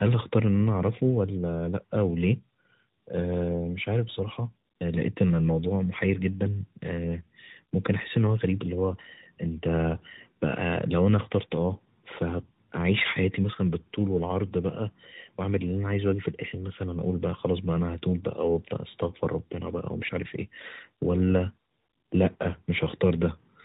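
From start to finish the speech carries tandem speech coding: it has passed through two speech coders in a row, the sound pointing to a CVSD link and then AMR-NB, probably with a G.711 A-law hop between them. Each stage re-encodes the previous one's errors, so the voice is rough, muffled and warbly. A spectrogram shows nothing above 3.8 kHz, with smeared, blotchy harmonics, and the waveform looks grainy.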